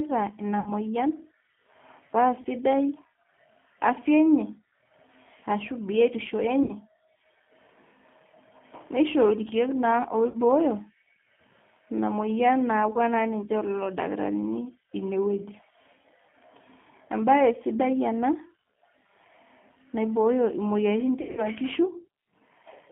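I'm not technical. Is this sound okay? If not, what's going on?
No. Throughout, the speech has been squeezed through the G.729 codec, a low-rate telephone codec that rebuilds the voice from a simplified model of the vocal tract and pitch instead of sending the real waveform. Everything above about 3.4 kHz and below about 150 Hz is gone, so the voice sounds narrow and boxy. The modelling damage is plainly audible: it has a rough, slightly synthetic edge.

There are also five short dropouts caused by VoIP packet loss concealed by the speech codec. When pieces of the call went missing, the decoder guessed by stretching the last bit of voice it had into a fading buzzy tone or noise. This happens at 0.60–0.73 s, at 2.41–2.47 s, at 6.63–6.74 s just after "ashu biotisho", at 10.30–10.37 s, and at 21.21–21.46 s. The first three and the fourth cover 40 to 60 ms of missing sound each. The last is the worst, with 140 ms missing in scattered gaps, the longest lasting 80 ms. 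Because each rebuilt moment depends on the one before, the voice stays weak or smeared briefly after each gap.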